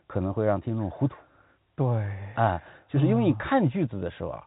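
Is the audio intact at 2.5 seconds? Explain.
Yes, at 2.5 seconds the speech is intact, with no dropout, click or distortion, only the narrow telephone band of G.711 coding, which passes nothing above about 3.8 kHz.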